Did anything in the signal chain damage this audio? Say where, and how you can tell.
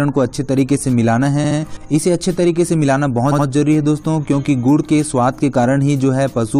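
Yes. Repeated frames occur at 1.43 to 1.57 s and again at 3.31 to 3.45 s, a codec or storage fault. At each point a block of about 70 ms plays three times in a row, which fits a short run of compressed frames being written or sent more than once. The decoder replays the same slice, so the sound stutters. Each event adds about 139 ms, stretching the audio.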